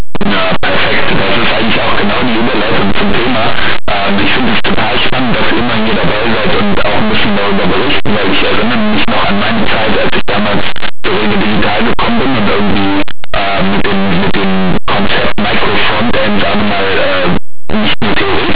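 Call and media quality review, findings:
Linear audio read as companded, whole clip. Harsh, very loud distortion over the speech from start to end. Probable component: decoder format setting. Linear 8-bit samples expanded as mu-law codes. Small values just on one side of zero map to the largest outputs, so quiet signal becomes loud, harsh distortion. The source itself was stored as linear 8-bit.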